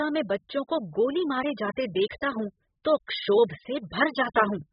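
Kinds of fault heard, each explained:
AAC compression: throughout the clip, nothing above 5 kHz, heavy damage, a dull, smeared, warbling texture on the speech. This is likely AAC-LC coding at a very low bitrate, around 8 kbps, quantising the spectrum so coarsely that the cut-off drops and bands thin out.
Pre-echo: at 2.09 s, between "मारे जाते" and "हूं तो क्षोभ", and again at 3.07 s after "हूं तो", a hiss of 13 to 15 ms runs just ahead of a sharp onset. The transform block's quantisation noise, sized for the loud attack, spills into the quiet instant before it.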